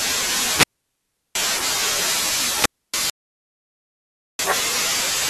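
Wireless microphone squelch dropouts at 0.48 to 1.38 s and 2.53 to 2.94 s: the fading radio signal brings up hiss until the receiver mutes, leaving holes of about 0.72 s and 0.28 s. An audio dropout to silence follows at 3.1 to 4.39 s, where 1.29 s of speech is replaced by silence with no room tone, likely from a lost input.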